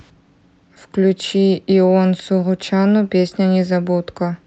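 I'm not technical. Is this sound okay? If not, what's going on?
Yes, the sound is fine; nothing has gone wrong.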